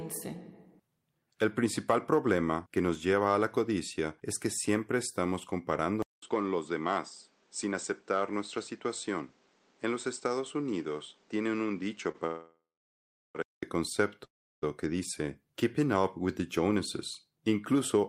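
At 6.02 s, just after "es que siempre estamos", the input has likely switched to a poorer device. A 200 ms silence comes first, then the speech continues band-limited to 8.5 kHz, duller and roughly 5 dB quieter, over a new noise floor about 35 dB down, until 13.63 s.

At 12.11 s a packet arrived late and the jitter buffer emptied. The receiver held the last sound for 26 ms until it came, so one sound stretches briefly with a slight buzz, and nothing is lost.

From 12.26 s to 13.37 s a call audio freeze, likely from packets held up in transit, stops the speech. The receiver extends the last sound into a fading buzz, then 740 ms of silence. The speech resumes where it stopped after a 1.09 s gap. A second freeze, from 14.25 s to 14.64 s, follows the same pattern: a short fading tail, 340 ms of silence, and a 375 ms delay.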